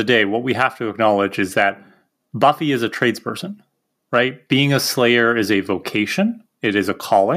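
A speech recording with nothing technically wrong with it.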